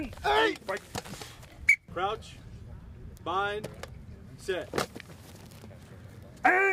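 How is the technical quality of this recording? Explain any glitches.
There's one glitch worth flagging, and it sits right at the end. From 5.22 s to 6.72 s you get sample clock jitter: the converter's clock wobbles by something on the order of a microsecond, so each sample lands a touch early or late. Where the waveform is changing fast, that timing slip turns into an error roughly 40 dB under the signal. You hear it as a fine hiss or grit riding on the louder, brighter moments.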